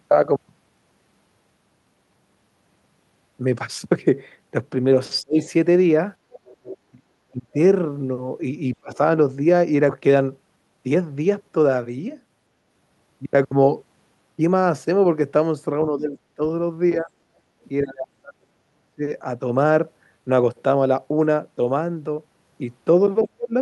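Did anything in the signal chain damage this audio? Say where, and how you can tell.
Yes. Several stages left audible damage.

Speech suppressed in double talk, in call processing. The speech dips sharply, by about 30 to 35 dB, at 5.21–5.46 s, 6.91–7.57 s, 8.76–8.99 s, 15.88–19.02 s and 23.23–23.53 s. The likely cause is an echo canceller that mistook overlapping talk for echo and attenuated both.

The other side's voice is leaking through, also in call processing. From 5.41 to 6.77 s a second voice sits underneath, about 20 dB below the main speech. The echo canceller likely failed to remove all of the loudspeaker signal from the microphone.

Skip ahead, at the network and jitter buffer stage. At 9.89–9.91 s the sound jumps forward with no gap fill. Roughly a second of audio is gone, and the two sides are butted together. The receiver discarded buffered audio to cut its delay.

Jitter buffer speed-up, at the same stage. 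From 10.01 to 11.02 s the speech runs about 8% fast but keeps its pitch. Roughly a tenth of a second was trimmed away in small pitch-period slices to shrink the buffer.

Background gated by the echo canceller, in call processing. At 17.42–17.54 s the room sound briefly dips by about 6 dB and then recovers. The canceller clamped the microphone while the loudspeaker was active.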